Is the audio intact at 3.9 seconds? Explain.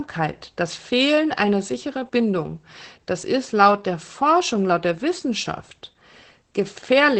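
No. At 3.9 seconds, as throughout the speech, Opus voice compression is plainly audible: SILK-style linear-prediction coding with coarse excitation, consistent with roughly 12 kbps, makes it muffled, hoarse and faintly robotic. A spectrogram shows nothing above 8.5 kHz.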